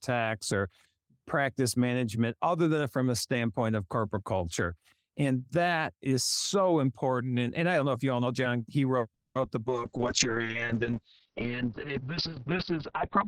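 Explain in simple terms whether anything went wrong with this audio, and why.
Yes, a few things went wrong, all close together near the end.

A call audio freeze, likely caused by packets getting held up on the network so the receiver ran out of audio to play. From 9.14 to 9.35 s the speech stalls: the last sound is stretched out, then about 0.13 s of silence, then it carries on where it left off, so nothing is actually lost.

Short concealed packet loss comes right after. At about 9.41 and 9.45 s, a hundredth of a second of the call never arrived, and the receiver papered over each hole by continuing the sound it had. Each one passes as a tiny smear or wobble.

A call bitrate drop follows. At 9.68 s the connection's capacity estimate fell sharply, so the encoder had far less data to work with. From there to the end the speech sounds rougher and muffled, with everything above about 4 kHz cut away.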